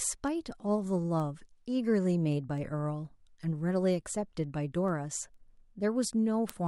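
Speech carries word clock ticks from 0.28 to 6.50 s, about thirty sharp ticks roughly every 0.2 s. A receiver free-running about 100 ppm off the sender's clock slips one sample per tick. The steady, metronomic spacing separates it from random clicks or buffer dropouts.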